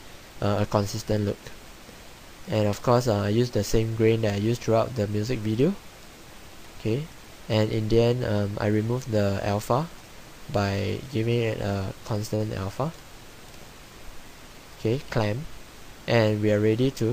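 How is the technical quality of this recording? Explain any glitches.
Two network playback glitches stand out, both from a jitter buffer handling uneven packet arrival.

At 12.35 to 12.42 s there is a short stall from a late packet. A packet failed to arrive on time, and the jitter buffer ran dry. The receiver stretched the last sound for about 47 ms until the packet came. Playback then resumed from the same point, so nothing is lost. The cost is a held sound with a buzz or dip. The delay also grew by 47 ms.

From 14.76 to 15.19 s there is a jitter buffer speed-up. The buffer now held more audio than its target, as happens after delayed packets arrive together. To shrink it, the receiver cut short pieces one or a few pitch periods long, many times in a row. About 40 ms was removed in total. The audio runs at about 109% speed with unchanged pitch, so this stretch sounds hurried.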